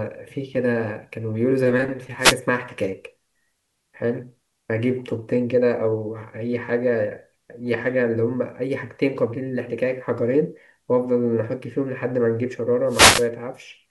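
At 2.19 s the speech is hit by a wireless microphone noise hit lasting until 2.36 s. A brief burst of static swishes over the voice. The FM radio link faded as reflected signals cancelled, and receiver noise rose into the gap. A longer hit follows at 12.87 s, running to 13.28 s. This one lasts about 0.4 s. The hiss thickens.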